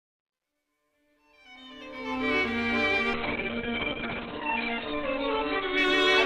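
From the start to 2.32 s, the fade-in rises in level but carries truncation distortion on a fade, worst between 0.00 and 1.39 s. The gain stage kept too few bits and added no dither. The grit fits a 12-bit word length: the quietest samples collapse onto a few coarse levels. On a waveform the low-level start looks like blocky square steps. A spectrogram shows a hash of harmonic grit across the band.

At 3.16 s a call bitrate drop sets in and lasts to the end of the clip. The call's bandwidth estimate fell and the encoder was starved of bits. The rough, watery texture points to a fall from around 64 kbps to about 6 kbps, held at its lowest for 1.07 s. The sound turns muffled as the audio bandwidth shrinks from 20 kHz to 4 kHz. A spectrogram shows the energy above 4 kHz cut away, with smeared, blotchy detail below.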